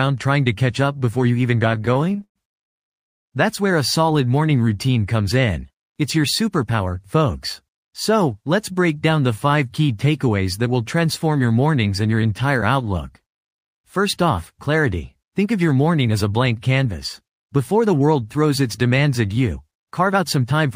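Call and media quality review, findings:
Repeated stalls (stutter), 1.69–3.28 s: 18 jitter buffer underruns, 564 ms concealed by extending prior sound, longest gap 200 ms, nothing lost, audio drags.

Jitter buffer speed-up at 5.49–6.94 s (109%), 13.73–15.68 s (106%), 16.85–18.50 s (108%), 19.99–20.71 s (109%): pitch-period trimming drains excess buffer, roughly 150 ms each (last about 70 ms), audio hurried.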